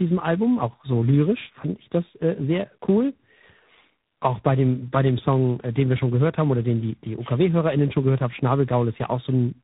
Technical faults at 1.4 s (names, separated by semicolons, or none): tandem speech coding